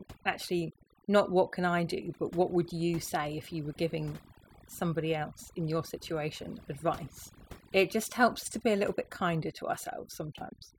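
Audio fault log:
Throughout: overdone noise removal. The noise reduction was set too strong for this speech, so single frequency bands near its noise estimate are pulled far down or cut out. Quiet parts of the voice vanish with them, leaving a lowered background that breaks up into twinkling specks.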